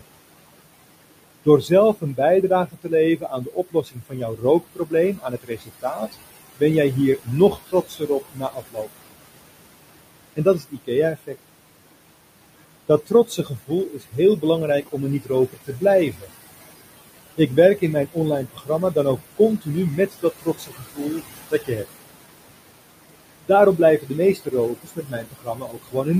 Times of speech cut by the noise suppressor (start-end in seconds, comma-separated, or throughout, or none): 1.45-6.62, 7.18-8.88, 10.36-11.36, 13.06-16.32, 17.37-21.85, 23.09-26.19